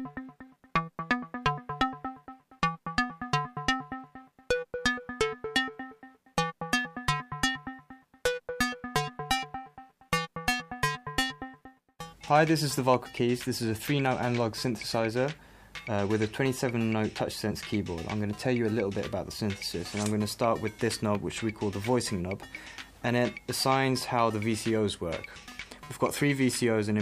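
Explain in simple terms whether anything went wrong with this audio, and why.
Nothing went wrong with this recording; there are no dropouts, clicks, glitches or other technical faults anywhere in it. It can be listened to as it is.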